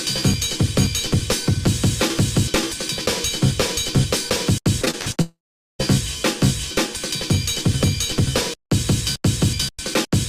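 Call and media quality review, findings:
Repeated packet loss (robotic sound), 4.81–5.17 s: choppy stutter. Five short holes, the longest 48 ms, about 140 ms in total, roughly 39% of the span, each patched by the jitter buffer/PLC repeating the last sound. Spectrogram: smeared, repeated harmonic slices with abrupt edges. Waveform: repeated cycles between small breaks.

Long network dropout, 5.21–5.81 s: about 580 ms of sound missing, likely a transport/network outage. Concealment carries a fading buzz or hiss briefly, then about 440 ms of near-silence before the audio resumes with the gap skipped. Spectrogram: decaying smear into an empty band. Waveform: tapering tail, then a flat line.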